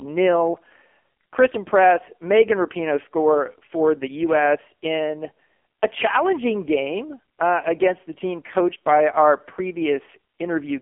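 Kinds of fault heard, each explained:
AMR narrowband mobile codec: The speech passes through a 2G/3G phone codec that rebuilds the voice from a vocal-tract model. Nothing above 3.5 kHz survives, and lows below 250 Hz are thin. The voice sounds heavily buzzy and synthetic. That fits a low rate near 6 kbps.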